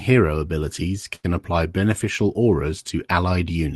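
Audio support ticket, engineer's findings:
Short stall from a late packet, 1.15–1.26 s. Speech held about 82 ms, then resumes from the same point. Nothing lost, but later audio runs 82 ms late. Probable jitter-buffer underrun; receiver stretched the last frame. Spectrogram: frozen, smeared harmonics. Waveform: repeating cycles, slight dip.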